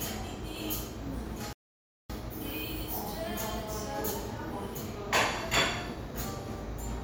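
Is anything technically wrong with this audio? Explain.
Yes. There is a playback stall from 1.53 s to 2.10 s. The everyday sound cuts out abruptly mid-flow and the output stays silent for 565 ms before the audio returns. This most likely happened because the player's buffer ran dry or its audio thread was blocked, so nothing was delivered to the output until it recovered. The result is a clear hole in the sound rather than a fade or a glitch.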